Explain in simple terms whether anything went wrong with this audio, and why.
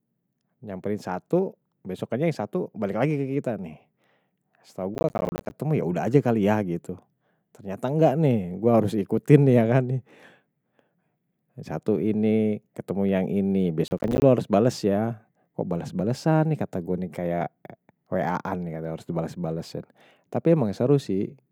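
Two bursts of processor overload crackle interrupt the speech, from 4.94 to 5.51 s, just before "ya udah", and from 13.88 to 14.22 s, right after "yang ini". The computer fell behind. Dozens of tiny chunks, each about a hundredth of a second, came out as silence, which sounds like gritty tearing.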